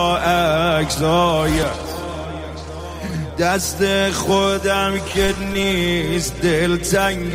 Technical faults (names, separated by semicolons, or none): repeated packet loss (robotic sound)